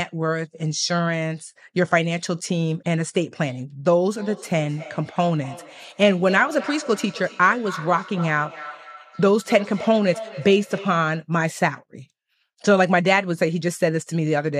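Speech with feedback echo between two devices from 4.17 to 11.21 s. A second device replays the sound into the microphone, so copies return roughly every 0.3 s at up to about -15 dB. On a spectrogram they show as faint duplicate contours trailing each burst.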